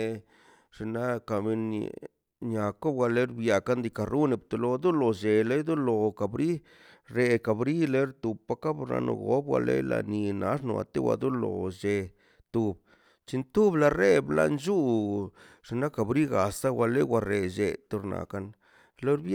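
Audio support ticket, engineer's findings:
No faults found in this speech audio.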